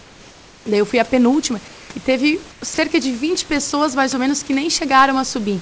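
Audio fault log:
0.00–0.66 s, 1.68–1.90 s, 2.52–2.62 s: comfort noise in place of the background. The real room background gives way to a smooth, featureless hiss in each pause. The first gap follows nothing. The second comes right after "eu fui a penúltima". The third is only 0.1 s long. The fill sits about 5, 2 and 4 dB below the true background. The likely cause is discontinuous transmission: the sender paused, and the receiver synthesised noise roughly matching the spectrum.
2.74–2.78 s, 3.70–3.72 s: sound dropped by the voice detector. Brief pieces of speech vanish, 40 ms and then 20 ms. Steady noise briefly replaces them. The second gap falls just before "mais ou menos que". The likely cause is the sender's voice detector treating quiet speech edges as background and stopping transmission. The receiver then filled the hole with comfort noise until speech resumed. These short losses sound like brief gaps in the speech within a band that ends at 8 kHz.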